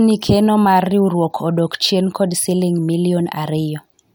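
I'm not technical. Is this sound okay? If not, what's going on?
Yes, this sound is okay, and there's nothing going on that needs fixing.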